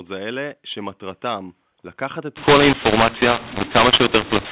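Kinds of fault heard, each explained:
mu-law and A-law mixed up: from 2.37 s to 4.51 s, speech coded with the mu-law curve is decoded through the A-law curve, so each 8-bit code maps to the wrong amplitude. The speech turns harsh and gritty, with some levels swollen and others shrunk, and pauses fill with hiss. A waveform shows a jagged envelope whose quiet gaps never settle to zero. A spectrogram shows broadband noise smeared up to the 4 kHz telephone limit.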